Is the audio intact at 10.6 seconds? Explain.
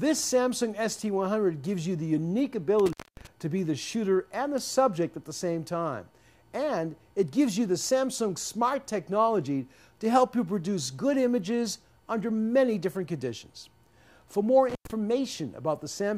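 Yes, the audio is intact at 10.6 seconds, with no dropout, glitch or distortion at that moment.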